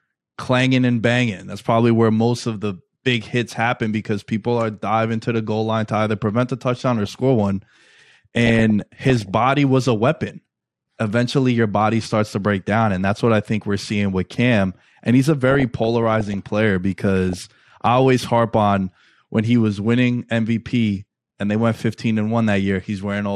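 Throughout, the speech sounds dull and granular with a plainly audible gurgle, consistent with MP2 compression, likely at a low rate of around 80 kbps starving the upper sub-bands of bits. DAB burbling appears at 6.75–7.06 s, 8.37–9.31 s, 15.50–16.34 s and 17.30–17.78 s: residual bit errors corrupt sub-band data, producing short blips of noise and jumps in level in single sub-bands.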